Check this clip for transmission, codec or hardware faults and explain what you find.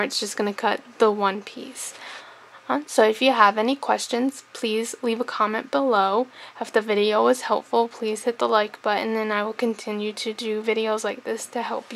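No faults can be heard.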